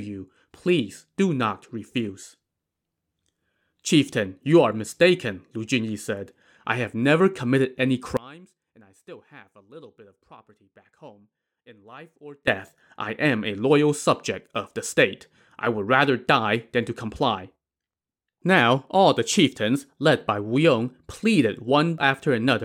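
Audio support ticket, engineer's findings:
Speech drops out hard from 8.17 to 12.47 s, about 24 dB down on mono sum. What's left is a faint trace. Likely one channel inverted in that span: flipped polarity on one side, so the centred voice cancels when L and R are summed. Worth checking the channel path and any phase switch toggled around 8.2 s.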